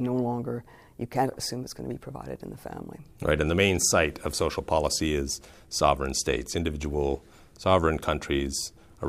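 No technical faults can be heard anywhere in this audio. Nothing in the sound points to a problem in how it was captured, processed or delivered.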